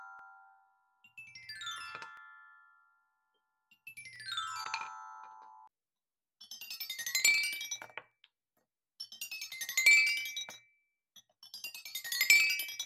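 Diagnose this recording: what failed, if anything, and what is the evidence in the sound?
Clock drift buffer slips at the driver or buffer stage, likely from two devices whose clocks differ by roughly 150 ppm, so the buffer periodically drops or repeats a block of around fifteen samples. About seven clicks result, one every 1.98 s, from 0.19 s to 12.07 s.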